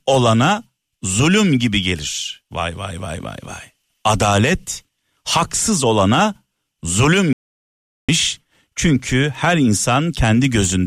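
At 7.33 s the speech cuts off mid-flow and only returns at 8.09 s, an audio dropout to silence lasting about 0.76 s. The input was likely lost for that stretch while recording carried on writing silence, so whatever was said there is gone. The gap is dead silence with no room tone underneath. On a waveform it shows as a flat line; on a spectrogram, a sharp-edged, fully empty vertical band.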